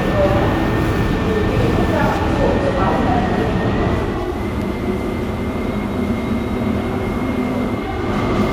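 At 3.96 s the receiver lost its digital signal and cross-faded over about 463 ms to the station's FM broadcast, a digital radio blending to analogue that lasts until 8.19 s. The FM path takes over from there: the level drops by about 5 dB and a steady hiss rises to roughly 30 dB below the sound, giving the passage a noisier character.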